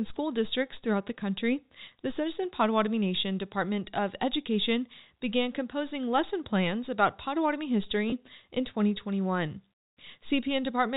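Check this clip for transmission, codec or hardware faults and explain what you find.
One fault turns up, a brief packet loss with pitch repetition. From 8.10 to 8.12 s the speech holds on a slightly buzzy, stretched tone for about 20 ms, which fits a single lost packet. The receiver filled the gap by repeating the last pitch period, fading it so the flow continues without a hard break. The G.711 telephone coding caps the band at 4 kHz, with faint quantisation noise at most.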